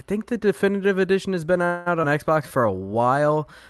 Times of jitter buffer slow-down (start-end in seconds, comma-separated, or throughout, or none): 2.43-2.79